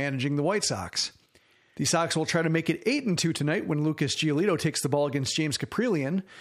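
From 0.11 s to 6.39 s, clock slip clicks run through the speech as a soft, even rattle of around two hundred ticks, one roughly every 30 ms. The likely cause is two unsynchronised clocks about 700 ppm apart forcing single-sample slips. Unlike random crackle, the spacing never varies.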